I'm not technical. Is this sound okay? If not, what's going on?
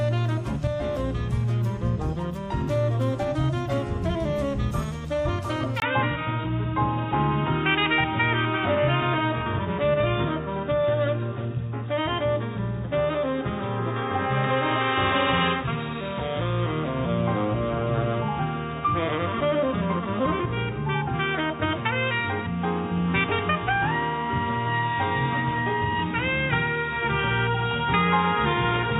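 No. From 5.8 s the sound turns dull and boxy after a tiny gap, likely because the input switched to a poorer device that loses everything above 3.8 kHz.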